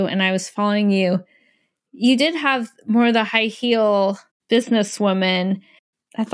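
No technical faults can be heard anywhere in the speech.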